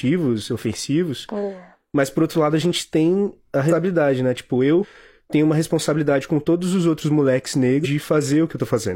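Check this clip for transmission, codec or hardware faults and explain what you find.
The speech has one fault type, compressed frames skipped, occurring three times. Frames are lost, so playback jumps ahead by multiples of the 46.4 ms frame length.

At 3.67–3.73 s, after "a gente tem a", about a third of a second vanishes. At 4.79–4.85 s, before "tenho uma responsabilidade com", about a fifth of a second vanishes. At 7.81–7.87 s, roughly 0.7 s vanishes. On a spectrogram the harmonics end abruptly at each join and new material starts. The waveform shows an envelope discontinuity there.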